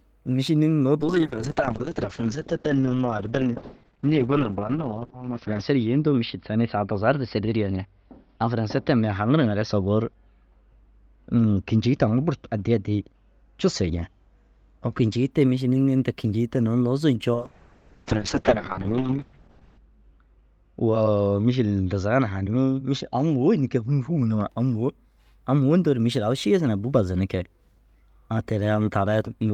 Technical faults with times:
1.00-15.37 call bitrate drop
17.34-24.55 call bitrate drop

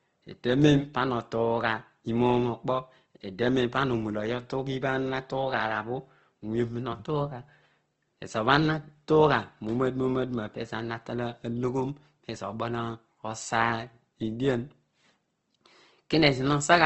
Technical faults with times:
0.00-16.85 Opus compression

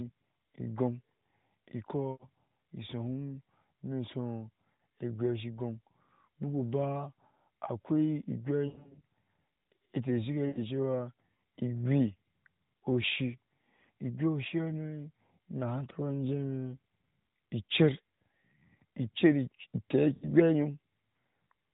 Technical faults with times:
2.12-2.27 lost AMR speech frames
4.74-4.80 lost AMR speech frames
8.68-9.01 lost AMR speech frames
10.48-10.59 lost AMR speech frames
20.14-20.32 lost AMR speech frames

